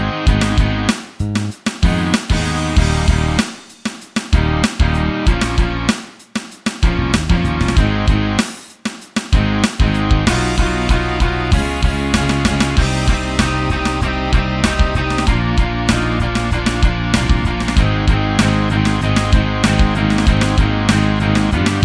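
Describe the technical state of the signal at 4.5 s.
The signal at 4.5 s is intact, with no dropout, distortion, clipping or other fault to be heard at that moment.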